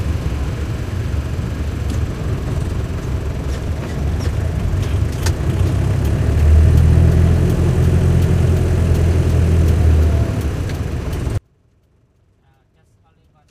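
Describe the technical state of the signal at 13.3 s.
At 13.3 s you're inside an audio dropout to a faint residue, running from 11.38 s to the end. Most likely the signal path broke while staying live, leaving only a faint trace roughly 35 dB down.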